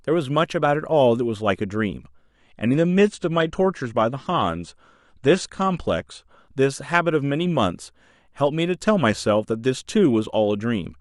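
Adaptive stream at a lower bitrate, 2.38–6.38 s: the speech suddenly loses everything above 9.6 kHz, suggesting a slowed connection forced a lower-bitrate AAC version.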